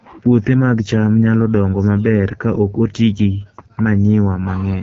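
From start to finish the speech carries AMR wideband (HD Voice) codec damage, and it is plainly audible: the voice sounds rough and raspy, which points to one of the codec's lowest rates, around 8.85 kbit/s. Below 6.4 kHz the sound is rebuilt from a pulse-excited vocal tract model, while the band above is filled with shaped noise. On a spectrogram, harmonics look smeared and grainy, a hazy noise band sits above 6.4 kHz, and nothing appears above 7.5 kHz.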